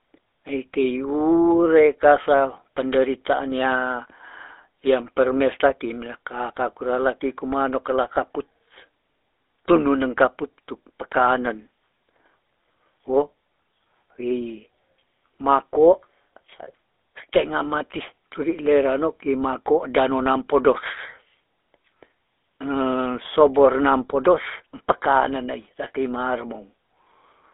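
Speech throughout, run through the GSM full-rate codec. Nothing passes above 3.8 kHz. The codec's coarse pulse excitation adds a plainly audible buzzy, gravelly roughness.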